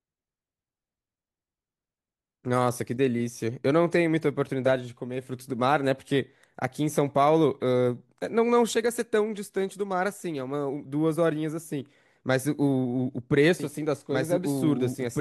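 A second, late copy of the signal is likely being mixed back in, either a slower capture path or an edit holding two copies out of step, so this speech clip carries a doubled audio track from 13.6 s to the end. A full-band duplicate, about 5 dB quieter, trails the original by roughly two seconds with no reverberant tail or room colouring, and it cuts in abruptly.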